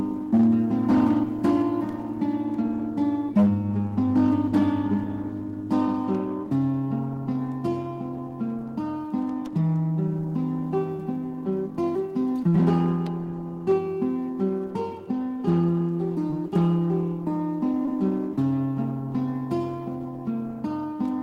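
Brief smears or wobbles interrupt the sound at 10.96–10.99, 12.48–12.54, 16.30–16.33 and 17.86–17.88 s. This is short concealed packet loss: 10 to 40 ms of audio arrived too late, and the receiver patched each gap by extending the preceding sound before blending back.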